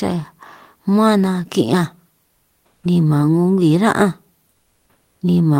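From 2.25 to 2.83 s, ending just before "ni man", and again from 4.49 to 5.21 s, the real background gives way to comfort noise: a flat, featureless hiss about 8 dB and 7 dB quieter, likely generated by the receiver during Opus discontinuous transmission.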